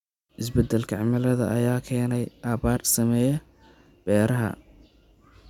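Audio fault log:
No faults are heard anywhere in the speech. Nothing in the recording calls for a timed entry.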